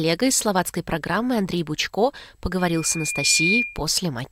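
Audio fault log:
2.58 to 3.82 s, loudspeaker feedback squeal: a pure 2.4 kHz tone swells over roughly a second to around 5 dB above the surrounding sound as the mic-to-speaker loop gain passes one. On a spectrogram it is a single bright horizontal line, and the waveform envelope grows steadily.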